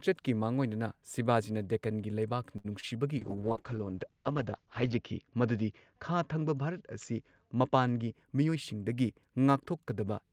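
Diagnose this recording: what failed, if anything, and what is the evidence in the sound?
Right at 2.57 s there's a short stall from a late packet, a network and jitter buffer problem. A packet hadn't arrived when it was due, so the buffer ran dry and the receiver held the last bit of speech for 69 ms until it showed up, then carried on from the same spot. Nothing is lost, but the sound hangs for a beat through 2.66 s, and the playout delay ends up 69 ms longer.

Just after that, from 2.80 to 2.94 s, there's a short concealed packet loss, also on the network side. About 20 ms of speech never made it to the decoder in time. The receiver patched the hole with 24 ms of synthesized continuation of the preceding sound, then crossfaded back into the real signal. It comes across as a brief smear in the speech, and the passage runs a few milliseconds longer than it should.

From 3.18 to 8.19 s there's a call bitrate drop, which is a codec consequence of the network's bandwidth estimate falling. 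The encoder went from 32 kbps down to 8 kbps and sat at the bottom for 1.79 s. At that rate Opus narrows the audio band from 20 kHz to 8 kHz, so the speech gets muffled and a bit rough and watery until the rate comes back up.

Overlapping the tail of that, from 7.95 to 8.73 s, is a jitter buffer speed-up in the receiver's playout stage. The buffer was holding more audio than its target, so it trimmed out short pitch-period chunks again and again, dropping roughly 70 ms in total. The speech plays at about 109% speed with the pitch unchanged, so it sounds a touch hurried through that stretch.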